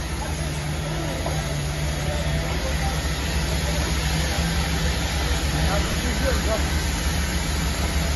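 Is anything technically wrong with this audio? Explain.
Yes. Between 5.83 and 5.93 s the sound briefly turns into a grainy, hissy smear, with its tonal detail blurred in short flickers rather than one clean gap. This is lost LE Audio frames: about 40 ms of audio went missing across that 100 ms stretch, in brief runs of roughly 10 ms, which fits a handful of dropped LC3 frames. For each gap the decoder repeated the previous spectrum with randomised signs, producing noise-like filler instead of the real content.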